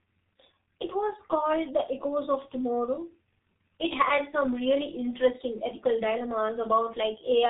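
From start to finish the speech carries heavy G.723.1 codec damage, the old internet-telephony codec. Nothing gets through above about 3.8 kHz, so everything sounds muffled and boxy, and the codec's slow-moving voice model smears the quick changes, leaving a hoarse, rough texture and consonants that blur into each other. The amount of damage fits that codec running at around 6.3 kbit/s.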